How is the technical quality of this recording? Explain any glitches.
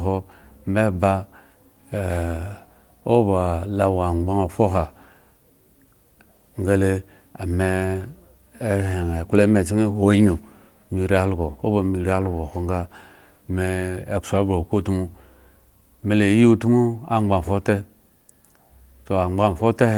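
The technical quality of this recording is sound, with no glitches to explain.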